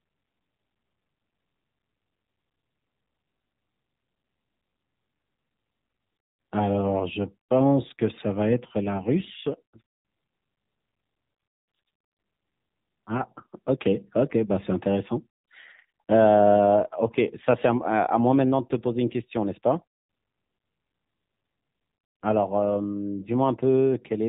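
From start to finish the speech sounds thin and boxed-in, with a buzzy, somewhat synthetic edge, and nothing is heard above about 3.8 kHz. This is the AMR narrowband mobile codec, whose damage is plainly audible here. It samples at 8 kHz and rebuilds the voice from a vocal-tract model fed by sparse pulses in each 5 ms, so the top of the spectrum is gone. The degree of buzziness fits one of its lower modes, around 7.4 kbps.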